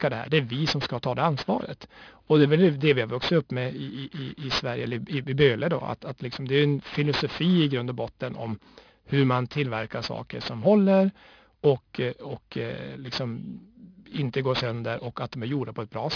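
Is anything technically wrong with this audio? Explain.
Yes. Aliasing runs through the whole speech clip. The audio sounds like it was downsampled to about 11 kHz without a low-pass filter first. Content above 5.5 kHz folds back as unrelated tones, sitting roughly 15 dB under the speech. Sibilants turn gritty and metallic.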